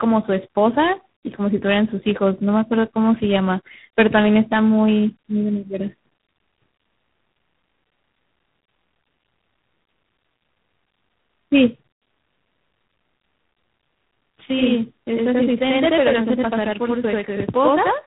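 From start to finish the speech carries tandem speech coding. It sounds like a chain running from a low-rate mobile codec through a G.711 link into G.726 at 24 kbit/s, so two speech coders worked in a row, the second re-coding the first one's already damaged output. The result is rough, muffled and warbly, with nothing above 3.9 kHz. A spectrogram shows a hard ceiling there and smeared, blotchy harmonics below it.

From 14.46 s to the end at 18.07 s, a channel delay (doubling) sets in. One channel runs 85.33 ms behind the other, which fits a 4096-sample buffer, and the two are summed to mono. Each syllable is followed by an equal-level copy, heard as a slap or doubling. On a waveform every burst shows a twin offset by about 85 ms. A spectrogram shows comb-like notches across the band.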